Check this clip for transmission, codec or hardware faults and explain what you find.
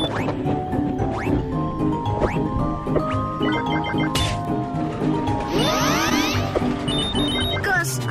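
One transmission fault is audible: a short concealed packet loss between 6.09 and 6.13 s. About 20 ms of audio never arrived in time, and the receiver covered roughly 12 ms of that hole by extending the preceding sound before blending back into the real signal. It is heard as a brief smear or wobble rather than silence. That filled, continuous quality distinguishes it from a plain dropout, which leaves an abrupt gap, or from a click, which is a sharp transient.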